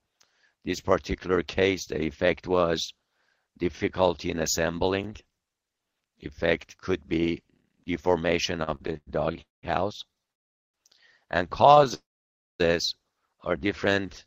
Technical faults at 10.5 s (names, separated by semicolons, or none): call audio freeze